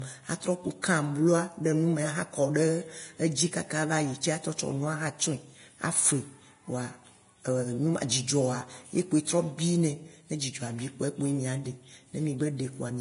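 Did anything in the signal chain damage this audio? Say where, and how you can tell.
Yes, at the codec stage: the speech carries damage most likely from Vorbis compression at a low setting, consistent with roughly 31 kbps. Nothing survives above 10.6 kHz throughout, and the remaining treble is coarsely quantised into hiss, leaving sibilants grainy, tones roughened and consonant attacks blurred.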